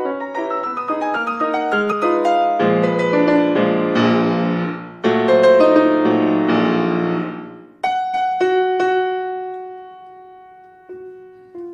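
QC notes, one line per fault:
1.91–1.93 s and 8.13 s, damaged data in a compressed stream: two very short blips, the first about 20 ms and the second about 16 ms, each breaking into the audio as a brief glitch. At each point the compressed data is wrong, so the decoder misreads or rejects the affected frame and loses sync. It then scans forward for the next valid frame header, and the misread data, or the gap left while it searches, is heard as the blip.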